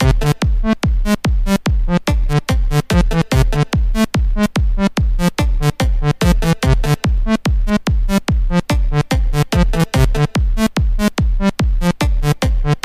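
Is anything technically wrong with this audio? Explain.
Yes. From 0.57 s to 12.46 s, a regular click repeats about every 1.32 s, roughly ten times in all. These are clock drift buffer slips. The likely cause is two devices running on separate clocks that disagree by a few hundred parts per million. The buffer between them slowly drifts until a small block, around fifteen samples, is dropped or repeated. Each slip breaks the waveform and produces a brief tick.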